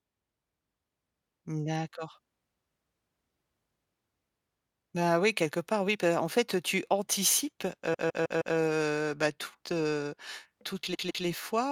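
Repeated frames occur at 7.93 s, just after "en fait tu anticipes", and again at 10.93 s. A block of about 157 ms, which fits a run of six compressed frames, was sent or written more than once, so the decoder replays the same slice. The first plays four extra times, adding 0.63 s before "bah toutes heu". The second plays two extra times, adding 0.31 s. Each sounds like a mechanical stutter.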